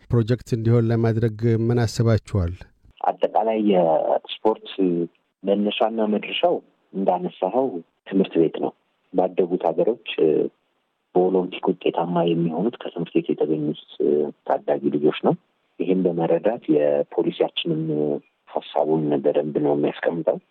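No technical faults are audible anywhere in the audio, so there is nothing to time or trace to a cause.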